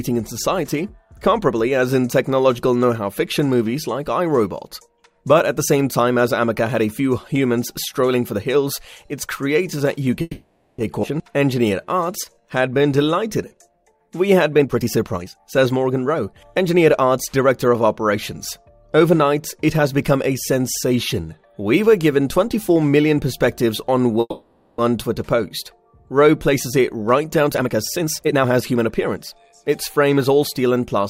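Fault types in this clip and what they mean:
call audio freeze: At 10.21 to 10.81 s and 24.20 to 24.81 s the sound halts and its last fragment is stretched into a fading buzz for about 0.57 s and 0.58 s, with only a brief moment of silence before playback resumes exactly where it stopped. Nothing is lost, but each stall adds that much delay. The likely cause is packets held up in transit, leaving the jitter buffer empty until they arrived.
skip ahead: At 11.02 s, shortly after the first freeze, playback jumps forward with only a 10 ms join, and roughly 0.4 s of sound is gone. The two sides of the cut are spliced almost directly. This is a stretch of audio dropped while later packets were already queued, which recovers about 0.4 s of the delay built up by the preceding freeze, at the cost of losing that content outright.
jitter buffer slow-down: From 11.38 to 14.35 s the audio runs at 88% speed with pitch unchanged. 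The receiver repeats single pitch periods or slivers of pauses many times in a row, adding 357 ms in total, so sounds are drawn out. The buffer was building up a reserve, lengthening playback instead of letting it stall again.
jitter buffer speed-up: From 14.60 to 16.33 s at 132% speed, and from 27.48 to 29.53 s at 128%, the sound is hurried but keeps its pitch. Short pieces of one or a few pitch periods are cut out repeatedly, roughly half a second in each stretch, to shrink a backlog that had grown past the buffer's target. The result is a compressed, rushed delivery.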